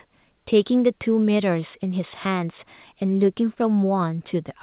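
Nothing stood out on listening to this speech, which has the narrow telephone-band sound of a call path with nothing above 4 kHz.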